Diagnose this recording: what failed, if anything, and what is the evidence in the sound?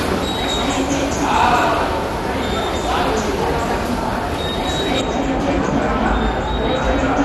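At the codec stage, likely MP2 compression at around 64 kbps starves the sub-bands of bits. The audio turns dull and gurgling throughout, with nothing above 12.1 kHz.

At the playback stage, de-emphasis was applied wrongly from 5.01 s to the end. A treble cut applied with no pre-emphasis to undo, or applied twice, leaves 10 kHz about 13 dB below 1 kHz, muffling the sound.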